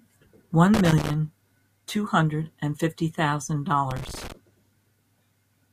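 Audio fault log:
0.74–1.14 s, loose connector crackle: a ragged burst of scratchy crackle over the speech for about 0.4 s, as a worn or dirty contact somewhere in the cable run flickers between touching and not, chopping the signal in and out with pops where any DC on the line jumps.
3.91–4.32 s, loose connector crackle: the same thing again for about 0.4 s, irregular and scratchy, as a contact shifts and makes and breaks again.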